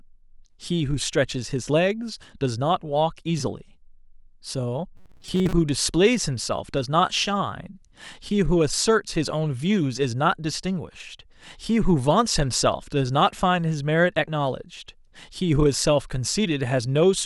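Robotic sound from repeated short buffers, 4.96 to 5.53 s: the speech becomes a rigid metallic buzz near 188 Hz, likely from a roughly 5 ms buffer replayed in place of most of the missing audio.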